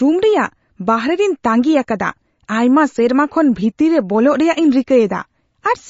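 Throughout, the speech has a hard ceiling at 7.6 kHz and a watery, swirling texture that fits a bitrate near 32 kbps, likely MP3 compression; a plain low-pass filter wouldn't swirl.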